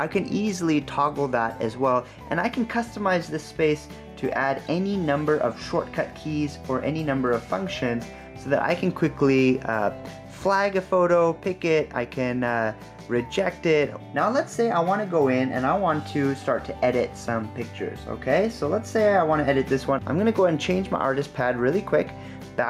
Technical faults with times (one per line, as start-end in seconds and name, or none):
0.00-22.70 gain pumping